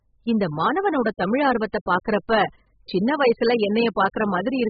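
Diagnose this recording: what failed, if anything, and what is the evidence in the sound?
Throughout, the speech sounds dull, smeared and fizzy, with nothing above 4.9 kHz. This is likely heavy AAC compression at the codec stage, starved of bitrate.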